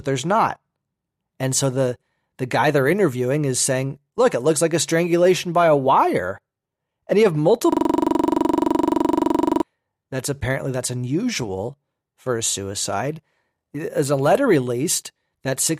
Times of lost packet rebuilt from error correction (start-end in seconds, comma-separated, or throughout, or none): none